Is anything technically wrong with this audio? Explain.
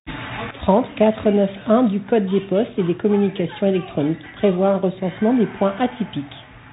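Yes, two faults are present.

Throughout, the Bluetooth CVSD headset codec narrows the band: nothing passes above about 3.8 kHz, consistent with a 64 kbit/s one-bit delta stream. Its adaptive step lags loud high-frequency energy, so sibilants turn scratchy over a granular hiss. Plain low-pass filtering would sound dull but clean.

At 0.51 s, a sudden gain jump drops the level by about 12 dB and holds it to the end. Speech and background noise fall together in one instant, likely from a gain setting applied without a ramp. A fade or compressor action would instead glide.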